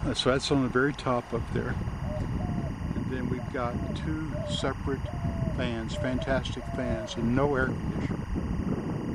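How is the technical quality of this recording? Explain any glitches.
The recording is marred by one fault running its whole length: timecode bleed, present from start to finish. Linear timecode from an adjacent track or cable has coupled into the audio path. That code is a square wave flipping between two pitches, here near 1 and 2 kHz, with a rhythm that fits 23.976 fps timecode. It sits roughly 20 dB below the sound, as a constant chirping, warbling buzz underneath everything.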